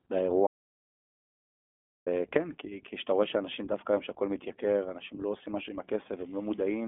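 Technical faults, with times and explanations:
Throughout: iLBC codec. The audio is confined to a telephone-style band of roughly 250 Hz to 3.5 kHz, with nothing at all above 3.7 kHz. The speech has a plainly audible rough, slightly synthetic grain, consistent with 20 ms frames coded independently at a rate that fits about 15 kbps. Wideband codecs would keep the upper band, and predictive narrowband coders tend to smear transitions. Here every frame stands alone, giving a buzzy, granular edge rather than a muddy one.
0.47 to 2.07 s: audio dropout to silence. For about 1.6 s the sound stops dead mid-flow and then returns abruptly. The gap is silent with no room tone underneath, so the input was likely lost and silence was written in its place. Packet-loss concealment would fill such a gap with repeated or fading sound, and a noise gate would leave a ramp at the edges, but this gap has neither.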